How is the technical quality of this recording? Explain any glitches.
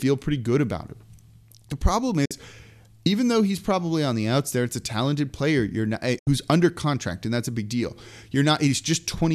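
The recording has two digital broadcast dropouts. At 2.25–2.31 s and at 6.19–6.27 s, between "player you're not eh" and "under contract and that's", the receiver muted after losing two and then three frames (about 48 ms and 72 ms). Each shows as an 8 ms fade to a flat waveform and a blank vertical band across the spectrogram.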